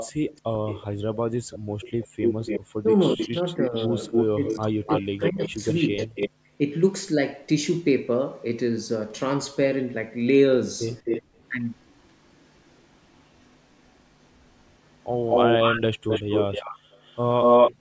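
From the start to 2.6 s a second copy of the speech trails 374 ms behind, a little quieter than the original. That is likely an echo leak, where a far-end loudspeaker's sound escaped the echo canceller and returned. Between 1.59 and 2.18 s the room sound briefly vanishes, dropping by about 40 dB for under a third of a second. That is the background gated by the echo canceller, which clamped the microphone while the loudspeaker played. From 2.82 to 5.98 s the speech dips sharply and breaks up in pieces, about a second and a half in total. This is likely speech suppressed in double talk, where both sides talking at once made the canceller turn everything down. A 289 ms echo leak overlaps this stretch, running from 3.19 to 6.3 s. Right after it, from 6.3 to 6.53 s, the background gates out again by about 40 dB. From 10.88 s to the end a 230 ms echo sits at roughly the same level as the speech, with a brief background gating around 11.22 to 11.35 s.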